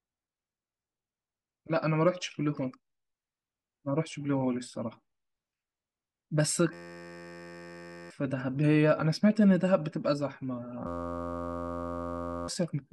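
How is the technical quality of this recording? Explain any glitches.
The recording has two audible breakdowns of the same kind. A system hang loop occurs from 6.73 to 8.10 s and from 10.87 to 12.48 s. Both times the system stalled while the audio hardware kept replaying one 11.61 ms chunk, which fits a 512-sample buffer. That produces a steady 86.1 Hz buzz and drops about a second and a half of speech each time. On a waveform it shows as a block of identical repeating cycles, and on a spectrogram as evenly spaced horizontal harmonic lines.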